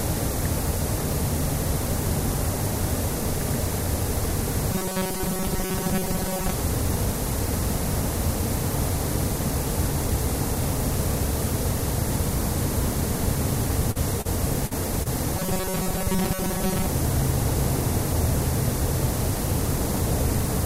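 A recording of everyday sounds, with two kinds of fault. From 4.73 to 6.52 s and again from 15.37 to 16.86 s there is robotic sound from repeated short buffers. The audio takes on a rigid, metallic buzz at 188 Hz, and most of each stretch is replayed material. The likely cause is audio arriving too seldom, with the playback side looping the last fragment of roughly 5.3 ms and skipping real audio in between. Just before the second buzz there is a run of short concealed packet loss at 13.91–13.97 s, 14.21–14.27 s, 14.67–14.73 s and 15.03–15.07 s. The first three are gaps of about 40 ms and the last about 20 ms. The receiver bridged each one by extrapolating the preceding sound and then crossfading back, which is heard as brief smears or wobbles spaced roughly 0.3 to 0.45 s apart.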